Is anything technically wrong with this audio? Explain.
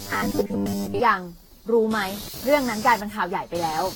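Yes. There are three problems.

From 0.01 to 1.0 s the speech has a robotic sound from repeated short buffers. It becomes a rigid, metallic buzz pitched near 100 Hz that only loosely tracks the speech. The likely cause is audio arriving too late, so the player keeps replaying its last fragment. A 100 Hz buzz fits a repeat about 10 ms long. Most of the real audio in that stretch seems replaced by these repeats, and the skipped parts are lost.

Computer activity noise runs through the whole clip. It is a buzzing, chirping pulse at around 200 Hz, sitting about 15 dB below the speech. It does not follow the speech. This kind of noise comes from the computer's changing workload disturbing the ground that the audio circuit shares. Processor, graphics or mouse activity then leaks into the signal as interference.

Generation loss is also present throughout. The speech sounds swirly, smeared and hollow, and attacks are blurred. 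Nothing is heard above 19.2 kHz. The sound points to lossy Vorbis coding at around 70 kbit/s, likely decoded and re-encoded about ten times. Each pass quantises again on a shifted frame grid. The noise and spectral gaps therefore pile up beyond what a single encode would leave.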